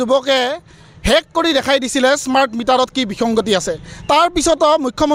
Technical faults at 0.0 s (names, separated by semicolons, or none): none